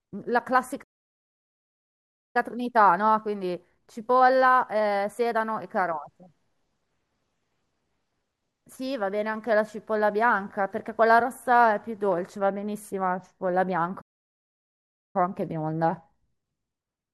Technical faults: playback stall; time-compressed catch-up

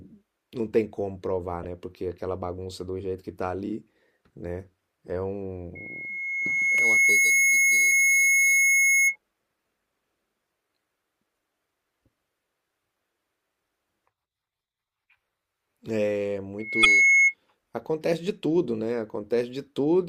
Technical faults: damaged data in a compressed stream; loudspeaker feedback squeal

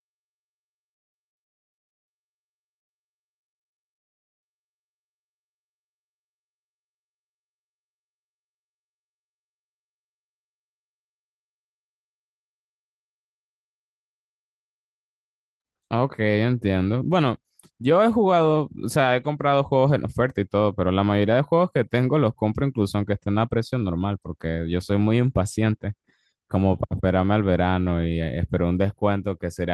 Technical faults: jitter buffer speed-up

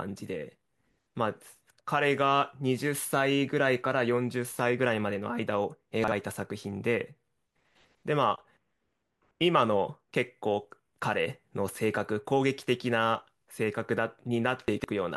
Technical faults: chunks out of order

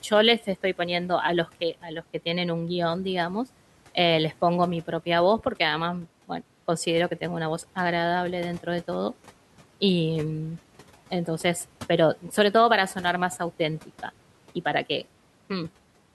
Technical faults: speech cut by the noise suppressor

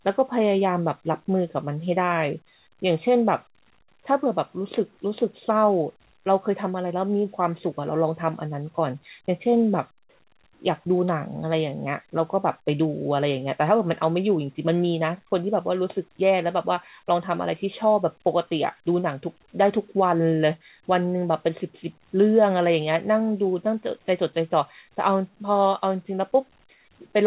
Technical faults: none

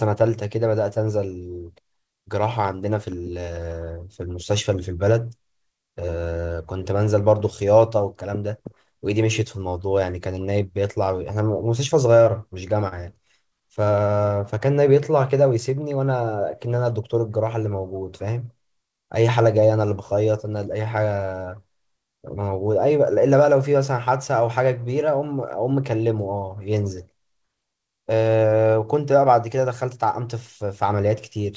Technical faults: short concealed packet loss

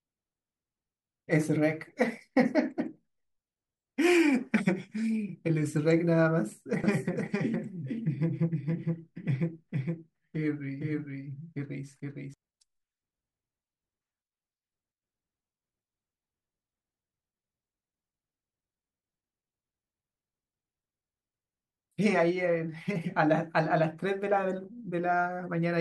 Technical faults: doubled audio track

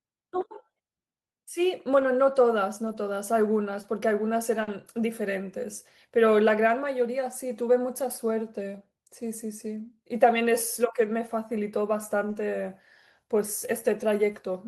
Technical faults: lost packet rebuilt from error correction; short concealed packet loss

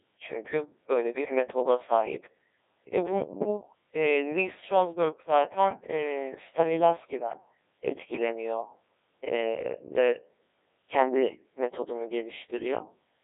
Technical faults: Codec 2 vocoder

